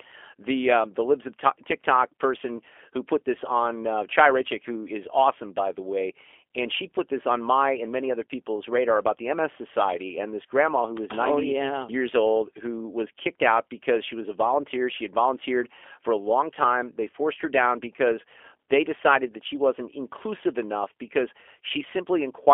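G.729 coding runs through the whole speech recording. Each 10 ms frame is rebuilt from a vocal tract filter, a pitch predictor and a few pulses, and the rough, slightly synthetic texture fits an 8 kbit/s G.729A stream. The band is held between 300 Hz and 3.4 kHz, so sibilants lose their edge and the low body thins out. The coding damage is plainly audible, with a rough, synthetic quality to the voice.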